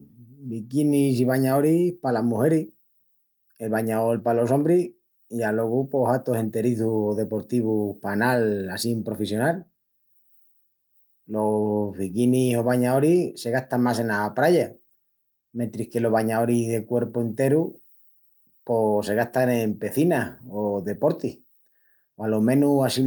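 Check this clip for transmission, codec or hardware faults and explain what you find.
Nothing audible in the speech points to a transmission, codec or hardware fault.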